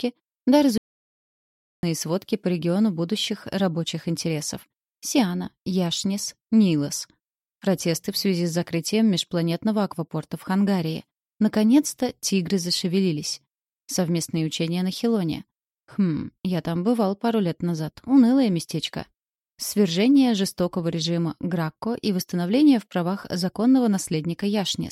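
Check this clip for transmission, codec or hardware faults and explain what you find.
One fault stands out: an audio dropout to silence from 0.78 s to 1.83 s, removing about 1.05 s of sound. The input was likely lost upstream, through a disconnect or momentary mute, while recording carried on writing zeros. The sound stops abruptly mid-flow and resumes just as suddenly, with no room tone in between. On a waveform it appears as a flat line; on a spectrogram, a dark vertical band across all frequencies.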